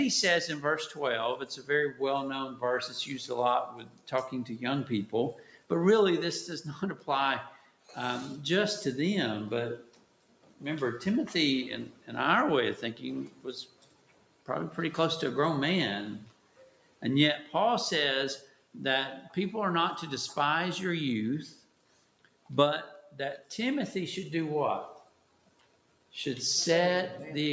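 Throughout, held sounds and tails pump and thin out with swings of about 10 dB while attacks pass. A noise suppressor built for speech was left running on music or sounds. Sound cut by the noise suppressor sinks by up to about 12 dB from 0.91 to 7.96 s, 9.81 to 14.48 s, 16.27 to 18.75 s and 21.52 to 26.13 s, around one to two seconds in total within each stretch, because the suppressor read steady and decaying parts as noise. The call microphone path tops out at 8 kHz.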